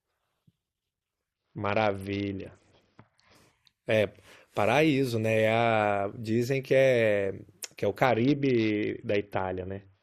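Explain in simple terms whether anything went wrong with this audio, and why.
Twice the speech suddenly turns dull and gritty, as if the crisp top end were muffled and rough static crept in: from 1.33 to 3.35 s, and again from 8.05 s to the end. This is a Bluetooth SBC bit pool drop. When the wireless link got crowded, the sending device squeezed the sound into far fewer bits to avoid cutting out. The highest tones were dropped and the rest stored more crudely, causing the dullness and grit until the link recovered.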